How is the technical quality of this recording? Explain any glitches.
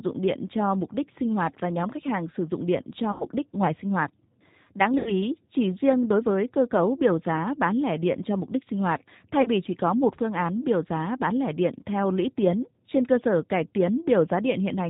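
The technical quality is limited: the speech runs through a low-bitrate phone codec from start to finish, and three brief dropouts are audibly patched over.

The G.729 codec, at 8 kbit/s, rebuilds speech from a vocal-tract filter and sparse pulses, so nothing above 4 kHz survives. The voice sounds plainly band-limited, rough and slightly synthetic.

VoIP packet loss concealed by the speech codec occurs at 3.12–3.29 s, 4.98–5.13 s and 9.42–9.49 s. Roughly 80, 80 and 30 ms of audio went missing, which fits runs of 10 ms frames. The decoder stretched its last pitch and filter into a fading buzzy tone or coloured noise, and the voice stays weakened briefly afterwards.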